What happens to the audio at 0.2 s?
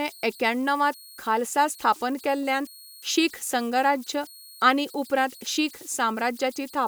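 At 0.2 s, and throughout the clip, converter idle tones sit under the speech. An undithered delta-sigma converter settles into repeating bit patterns on small signals. Here that produces a tone around 4 kHz and a grainy texture, about 25 dB below the signal.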